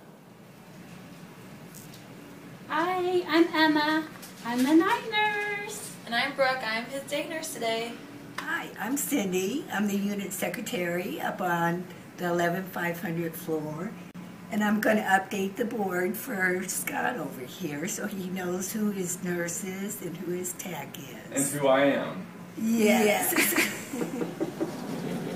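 Gap at a join of encoded pieces, from 14.11 to 14.15 s: a 35 ms hole of silence cuts into continuous sound. The pieces were encoded separately and joined untrimmed, leaving encoder start delay and end padding in place, with slightly smeared edges before the sound resumes where it stopped.

Doubled audio track, from 22.73 s to the end: a second full-band copy of the sound trails about a fifth of a second behind at roughly equal level. It has no decay or room colour and switches on abruptly, likely from a slower second capture path.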